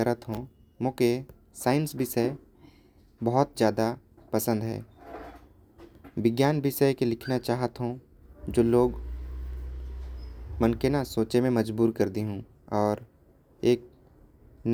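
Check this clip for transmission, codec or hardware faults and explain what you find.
Nothing faulty can be heard anywhere in this speech.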